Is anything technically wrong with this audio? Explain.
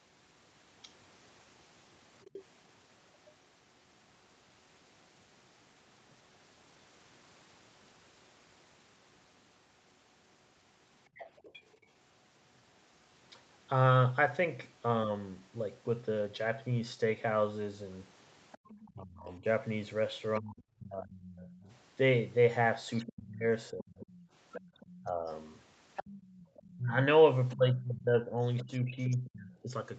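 Yes, there are two related faults.

Other side's voice leaking through: a faint second voice sits roughly 20 dB under the main speech, first in short scraps at 2.22 to 2.44 s and 11.17 to 11.86 s, then almost continuously from 18.52 to 29.3 s. It is likely echo. The talker's loudspeaker output reached the microphone, and the echo canceller failed to strip it out, so the far end's voice rides along underneath.

Speech suppressed in double talk: while that second voice is present, the main speech pumps down and breaks up, from 18.94 to 25.25 s and again from 26.77 to 29.7 s. The dips reach around 30 dB in the first stretch and around 25 dB in the second, covering roughly three and two seconds respectively. With both sides talking, the echo canceller likely could not tell the near voice from the echo and attenuated everything. The band limit near 8 kHz is ordinary call processing.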